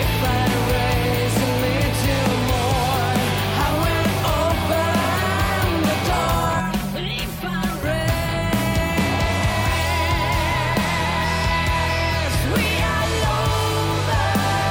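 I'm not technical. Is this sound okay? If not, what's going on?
No. From about 6.60 to 7.83 seconds the sound turns hollow, as if heard through a tube. This is channel delay (comb filtering): one side of the recording arrives roughly 5 milliseconds late, and when both sides are mixed together, certain evenly spaced pitches cancel, starting around 100 Hz. Unlike an echo, there is no separate repeat, and unlike a flanging effect, the hollowness stays fixed instead of sweeping.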